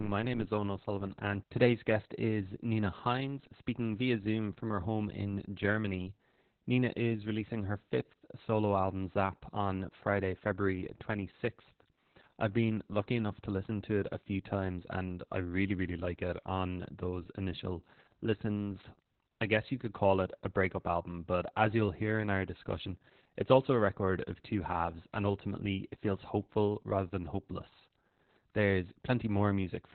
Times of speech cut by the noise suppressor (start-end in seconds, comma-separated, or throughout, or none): none